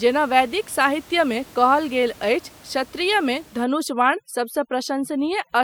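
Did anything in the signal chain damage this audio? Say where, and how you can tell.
Yes. From 3.64 s to the end, just after "अछि क्षत्रियमे", the call-processing stage hits it with overdone noise removal. The room noise, sitting about 26 dB under the speech before that, suddenly drops and breaks up into little twinkling specks. The suppressor is set too hard, so it's clamping individual frequency bands whenever they look like its noise estimate, and the quieter parts of the speech get dragged down with them.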